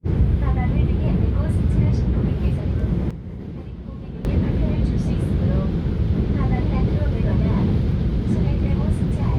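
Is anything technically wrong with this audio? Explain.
Yes. There is a sudden gain jump from 3.11 to 4.25 s. The digital gain was most likely switched in a single step, with no ramp, as a level setting or bit shift would do when applied instantly. The whole signal falls by about 12 dB at 3.11 s and returns at 4.25 s. The sound and its background noise drop and recover together, so the level changes abruptly in steps rather than fading.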